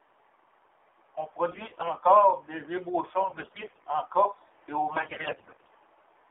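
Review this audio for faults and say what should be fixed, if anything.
The speech went through the AMR narrowband mobile codec at a low rate, which sounds consistent with about 7.4 kbps. Its vocal-tract model, rebuilt from sparse pulses, leaves a buzzy, synthetic voice confined to a 300 Hz to 3.5 kHz line band, with the damage plainly audible throughout.

AMR bit errors struck from 1.52 to 1.86 s, from 3.22 to 3.87 s, and from 4.92 to 5.69 s right after "et au". Roughly one bit in seven of the weakly protected payload arrived flipped. Misplaced excitation pulses and skewed gain and spectral values make the voice hoarse, scratchy and gargly while keeping its pitch and level.

Prevent this by using a wideband or higher-rate codec mode and stronger error protection or a more reliable radio link.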